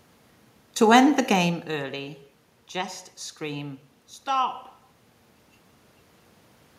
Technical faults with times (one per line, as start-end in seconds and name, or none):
none